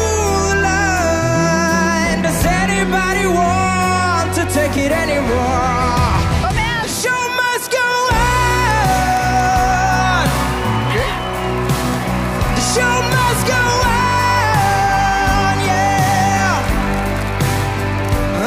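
No technical faults can be heard anywhere in this audio.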